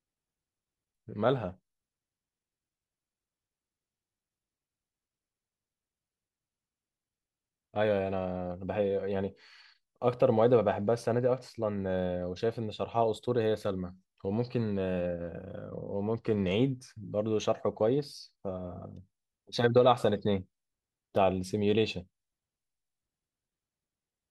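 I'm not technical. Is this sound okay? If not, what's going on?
No. From 15.69 to 16.52 s the speech briefly turns dull and muffled, with a gritty hiss underneath. That's a Bluetooth SBC bit pool drop: the wireless link got crowded, so the phone squeezed the audio harder, losing the crisp top end until the connection recovered.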